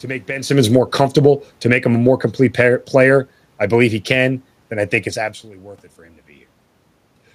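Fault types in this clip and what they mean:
automatic gain falling: the gain control, reacting to loud input or strong background noise, lowers level by about 7 dB over 0.59–5.44 s, so the waveform envelope and noise floor shrink together.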